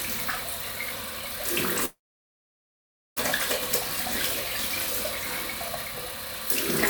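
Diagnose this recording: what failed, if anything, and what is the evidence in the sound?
The network stage most likely failed: a long network dropout cut off the incoming audio from 1.85 to 3.18 s. The receiver had nothing to play, so it stretched the last sound into a brief fading buzz, then fell to near-silence for about 1.23 s of the 1.31 s gap. When the stream resumes at 3.18 s it picks up further along, and roughly 1.3 s of the sound is simply gone.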